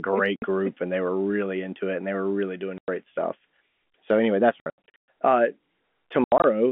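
Packet loss filled with silence cuts the speech at 0.36 to 0.42 s, 2.78 to 2.88 s, 4.6 to 5.08 s (scattered, about 340 ms lost) and 6.24 to 6.44 s. Missing packets became dead air, gaps in 20 ms multiples, with abrupt edges.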